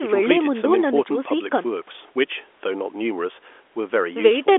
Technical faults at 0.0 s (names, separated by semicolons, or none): none